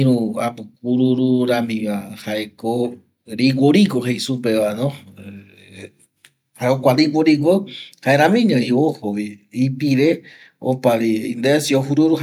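No technical faults are audible anywhere in the speech recording; nothing to flag.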